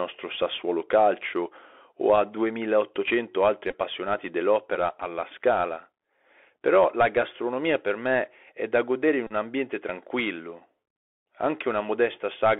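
The whole clip carries the Bluetooth CVSD headset codec: the speech sits in a narrow 300 Hz to 3.4 kHz band, consistent with a 64 kbps CVSD link. Its one-bit delta coding cannot track fast, loud changes, so sibilants turn scratchy over a plainly audible granular hiss.

At 3.71 to 3.75 s a Bluetooth headset packet repeat occurs: about 22.5 ms of lost audio, scattered across 30 ms, is filled by replaying earlier packet data. It sounds as a brief buzzy roughness, with the longest continuous run roughly 15 ms.

From 9.27 to 9.32 s a second, longer repeat covers 30 ms of lost audio. The replayed data recurs every 3.75 ms, producing a steady buzz near 267 Hz until normal packets resume.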